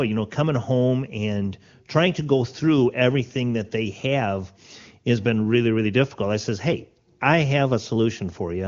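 Nothing stood out on listening to this speech, which carries the band-limited character of wideband HD Voice coding at a high rate.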